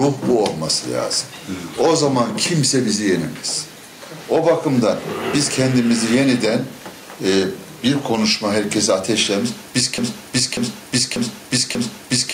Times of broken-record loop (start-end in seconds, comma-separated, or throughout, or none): 9.98-12.33